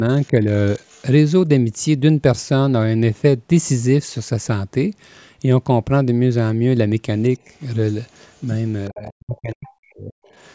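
Faint traces of the other side's voice leaking through appear at 0.22 to 0.28 s and 0.86 to 1.02 s, roughly 30 to 35 dB below the speech. The likely cause is loudspeaker echo that the echo canceller left in the microphone signal. Between these, at 0.33 to 0.46 s, the speech dips by a few dB: speech suppressed in double talk, likely with the canceller turning the talker down while both sides overlap. Leakage returns at 8.33 to 8.62 s. From 8.9 to 10.16 s the suppression is far heavier, with the voice cut by up to about 40 dB in pieces totalling about a second. Scraps of the far side come through at 9.05 to 9.12 s, about 20 dB down, then at 9.64 to 9.70 s and 10.24 to 10.32 s, weaker still.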